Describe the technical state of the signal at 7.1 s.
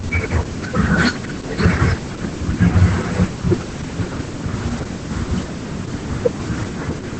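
At 7.1 s the speech is still under the Opus voice compression that runs throughout: the SILK coder works in wideband at a low rate, consistent with about 10 kbps, so nothing survives above 8.7 kHz and the coarse excitation leaves the speech muffled, hoarse and faintly robotic.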